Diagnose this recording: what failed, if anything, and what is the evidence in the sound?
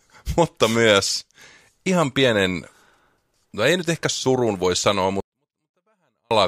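The sample-format conversion failed: 24-bit samples held in the low bytes of a 32-bit word were read as full 32-bit integers, a 24-bit alignment error. From 5.20 s to 6.31 s the sound stays clean but abruptly drops by about 48 dB, becoming almost inaudible.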